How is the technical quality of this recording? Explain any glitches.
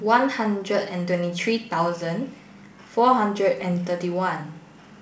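One glitch stands out in this speech recording, which comes over a G.722 wideband link whose coding leaves only a faint trace. From 3.60 to 3.69 s there is a pop and a rough, crackly burst with a brief change in level. These are bit errors on an ADPCM link. Flipped bits, roughly 0.2 percent, knock the decoder's step size and predictor off track, so each error rings on for milliseconds, which fits a few corrupted frames.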